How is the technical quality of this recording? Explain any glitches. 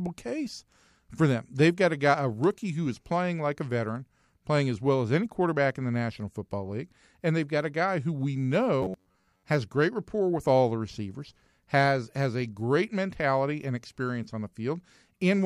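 The recording has one glitch, a stretch of robotic sound from repeated short buffers. It runs from 8.83 to 9.44 s, after "a guy who we" and before "has great rapport with". The speech turns into a rigid, metallic buzz pitched near 93.8 Hz. It still loosely tracks the words. The likely cause is new audio arriving too seldom. The playback fills the gap by repeating a slice of roughly 10.7 ms, about half the time. That fixed repeat rate imposes the steady buzz.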